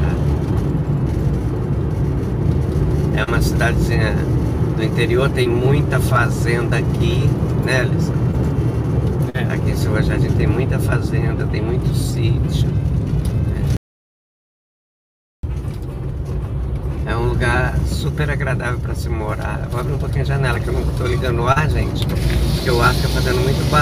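Short concealed packet loss comes first, at 3.23, 5.43, 8.31 and 9.30 s. Each gap is 20 to 40 ms of audio that arrived too late. The decoder patched it by extending the last sound, so each spot has a brief smear or wobble.

From 13.77 to 15.43 s there is an audio dropout to silence. The sound cuts off abruptly for about 1.7 s. Nothing remains, not even room tone. The likely cause is lost input, with silence recorded instead.

One more concealed packet loss, a 37 ms patch, smears the sound at 21.52 s.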